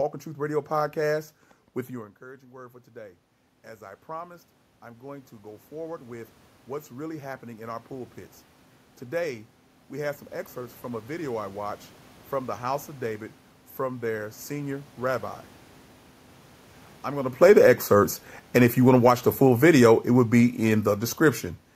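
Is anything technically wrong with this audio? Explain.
Yes. Automatic gain rising runs from 3.78 to 8.21 s: after the voice drops by about 18 dB when the talker moves back around two seconds in, the gain control slowly adds about 9 dB, so voice and room noise swell together over four seconds. It rises again briefly from 17.6 to 18.01 s, by about 3 dB.

Automatic gain falling occurs from 17.28 to 17.68 s, cutting about 4 dB, and again from 18.41 to 21.5 s, about 5 dB. Judging the input too loud, the control pulls its gain down, and the voice sinks together with its background.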